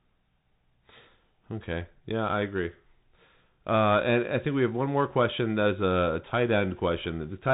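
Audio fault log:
Throughout: Bluetooth CVSD headset codec. Nothing above 3.8 kHz gets through, so the speech sounds narrow and muffled. The one-bit delta coding cannot follow fast, loud high sounds. S sounds turn scratchy, and a granular hiss sits underneath. This fits 64 kbps CVSD.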